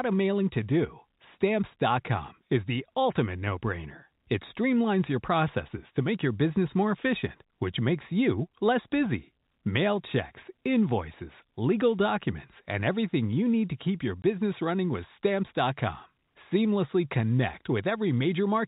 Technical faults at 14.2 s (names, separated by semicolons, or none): packet loss filled with silence